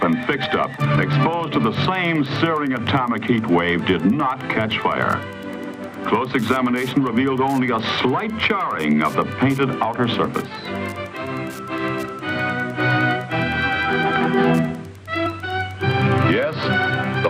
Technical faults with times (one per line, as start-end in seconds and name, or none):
0.00-17.29 Wi-Fi interference
0.96 compressed frames skipped
15.25 compressed frames skipped